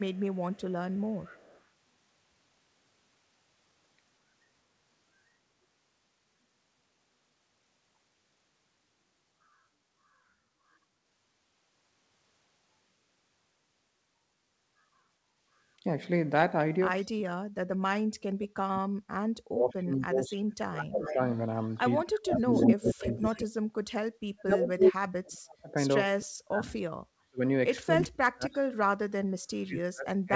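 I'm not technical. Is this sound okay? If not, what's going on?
No. There is an echo leak. A delayed copy of the voice comes back. It is faint from 0.12 to 1.62 s, and stronger from 20.52 to 23.38 s and 24.81 to 24.92 s. The likely cause is a loudspeaker echo getting through.

There is also speech suppressed in double talk. The voice drops sharply or cuts out from 17.03 to 21.19 s, 22.04 to 23.67 s, 24.28 to 27.41 s, and from 27.99 s to the end. This is likely the echo canceller turning down this side's talker along with the loudspeaker echo.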